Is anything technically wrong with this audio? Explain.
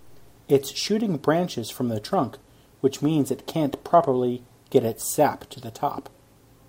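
No, nothing stood out on listening to this speech recording.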